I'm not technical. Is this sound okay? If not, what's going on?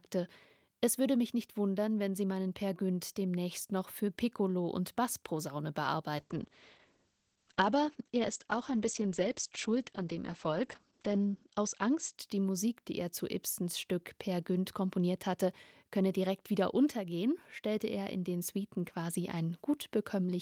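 No. From 6.19 s to 12.77 s there is a call bitrate drop. The connection weakened, so the call squeezed the sound into far less data. It turns rough and muffled, losing everything above 8 kHz. It is worst for about five seconds, then clears.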